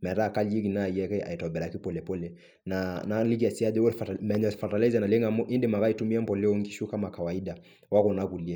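Clock slip clicks run from 0.26 s to 8.37 s as faint, regular ticks roughly five per second, each a single-sample jump. The likely cause is two unsynchronised clocks differing by around 100 ppm, so a whole sample of error builds up at steady intervals.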